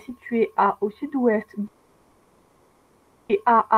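A speech clip with a long network dropout from 1.67 to 3.31 s: about 1.6 s of audio is likely lost in transit and replaced by a fading buzzy continuation, then low steady noise, with no true silence. On a spectrogram, harmonics smear and vanish into a flat band until speech resumes abruptly.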